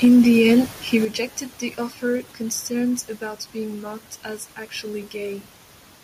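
From 0.04 to 0.59 s the speech has a harsh, crackling edge on its loudest moments, with peaks pushing about 2 dB past the converter's limit and a small fraction of samples flattened. This is likely microphone overload: the input volume is set so high that the converter runs out of headroom and shaves off the tops of the waveform. Only 0.01 s into that stretch, at 0.05 s, the voice and background together drop by about 2 dB in a single step. This is the microphone volume stepped down, likely the call software reacting to the overload by turning the device's input volume down at once.

That small cut doesn't remove the problem. From 0.94 to 0.97 s a brief crackle returns as peaks exceed the converter's limit by about 1 dB, again likely microphone overload, with a tiny share of samples clipped. At 1.05 s the level falls abruptly by about 7 dB, a much larger step than the first. This is most likely the software stepping the microphone volume down again after the renewed clipping.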